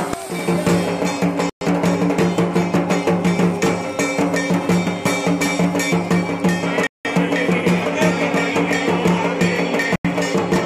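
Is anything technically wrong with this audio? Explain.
Yes. The sound cuts to full silence three times, at 1.50 to 1.61 s (about 117 ms), 6.87 to 7.05 s (181 ms) and 9.96 to 10.05 s (89 ms). Each is most likely a Bluetooth stall: delayed packets drained the headphone buffer. Unlike a clipped or muted burst, there's no crackle, just clean silence before playback resumes.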